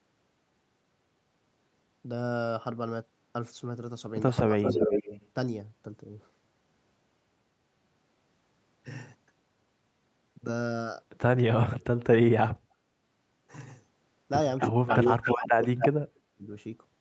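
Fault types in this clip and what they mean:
Speech suppressed in double talk: The speech dips by up to about 35 dB or cuts out in pieces at 4.57 to 5.09 s, 12.29 to 12.6 s and 14.7 to 16.45 s, likely because an echo canceller confused overlapping talk with loudspeaker echo and attenuated both.
Echo leak: A delayed copy of the speech returns at 4.64 s, 11.8 s, 14.58 s, 14.87 s and 15.61 s, likely from a loudspeaker echo not fully cancelled. The copy lags by 343 ms early and 272 ms later, ranging from barely audible to as loud as the speech.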